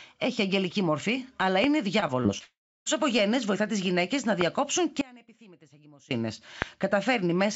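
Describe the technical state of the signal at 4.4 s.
At 4.41 to 4.43 s a single loud pop sits on top of the speech, peaking around 15 dB above it while the speech continues underneath. The sharp click is likely a voltage step from a plug, switch or static discharge, briefly shaped by downstream circuitry.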